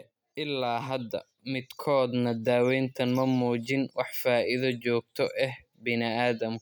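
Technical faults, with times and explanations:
0.35 to 2.54 s, automatic gain rising: the gain control judged the input too quiet and lifted it by about 7 dB over roughly two seconds, so speech and background noise swell together. On a waveform the envelope widens steadily; a spectrogram brightens evenly across all frequencies.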